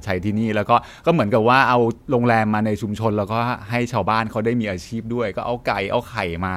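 No technical faults are audible.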